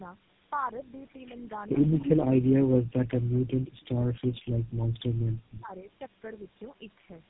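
Right through the clip there's tandem speech coding: the speech sounds re-encoded about three times over, each pass roughening it further, leaving it muffled, warbly and cut off above 3.8 kHz.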